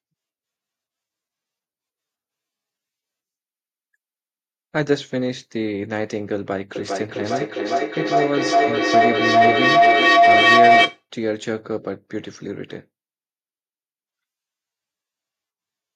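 Feedback howl runs from 6.76 s to 11.07 s. A loudspeaker's output is reaching a microphone on the same call, and each pass around that loop comes back louder than it left. Instead of dying away, the repeats collapse onto a single tone around 700 Hz, pulsing at roughly 0.4 s intervals as the loop cycles. The howl peaks at about 10 dB above the speech before cutting off at 11.07 s.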